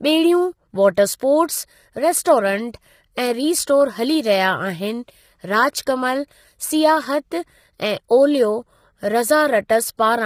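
Low-delay AAC compression, present throughout: the speech sounds rough and grainy, with noise filling the gaps between harmonics and nothing above 15.6 kHz. This is likely AAC-ELD, whose short frames blur pitch detail and strain a low bitrate, here consistent with about 24 kbps.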